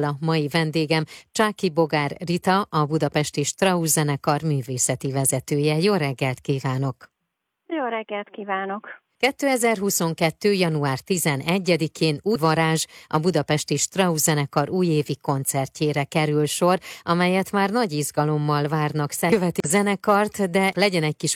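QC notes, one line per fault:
12.31–12.37 s, damaged data in a compressed stream: a 60 ms glitch just before "varázs a budapesti" as the decoder misreads corrupt frames and resyncs.
19.28–19.32 s, damaged data in a compressed stream: a 48 ms blip right after "már nagy izgalommal várnak", where bad bytes break frame decoding.
19.60–19.67 s, damaged data in a compressed stream: a 70 ms glitch from another corrupt stretch while the decoder hunts for a valid header.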